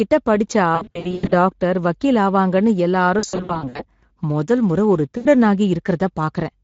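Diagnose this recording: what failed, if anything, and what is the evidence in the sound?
The failure is at the codec stage: Speex coding runs through the whole clip, and its damage is plainly audible. The speech sounds hoarse and grainy, with a noisy edge. This is CELP coding that lacks the bits to model the excitation accurately. The texture points to a middle quality setting, around 16.8 kbps. On a spectrogram, harmonics look smeared and speckled. Any content above 4 kHz shows as diffuse, shaped noise rather than clear structure.

The second fault is at the network stage: VoIP packet loss concealed by the speech codec. It appears in three places. From 0.75 to 1.34 s, just before "டாக்டர் வக்கீல் ஆவாங்கன்னு", and again from 3.19 to 3.85 s, just after those words, short dropouts are scattered across the span, each at most 60 to 80 ms. They are heard as stretched, fading fragments. A single 80 ms gap follows at 5.17 s. 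The decoder repeats its last pitch and filter with falling gain, and quality recovers slowly afterward. On a spectrogram, this looks like frozen, flat harmonic bands that fade out. On the waveform, it looks like decaying, oddly periodic stretches.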